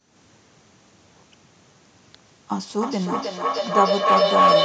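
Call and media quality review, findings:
Acoustic loop between two co-located call devices, mic to speaker to mic, gain above unity each pass. Feedback howl from 2.5 s to 4.64 s, narrowing to about 1 kHz, pulsing about every 0.3 s, peaking about 7 dB above speech.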